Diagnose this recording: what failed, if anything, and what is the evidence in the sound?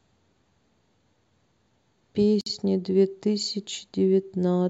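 A gap at a join of encoded pieces, from the codec stage: the speech drops to silence from 2.41 to 2.46 s, about 53 ms, then resumes where it stopped. Separately encoded pieces were butted together with their start delay and end padding untrimmed. A spectrogram shows a clean blank column across all frequencies, edges slightly smeared.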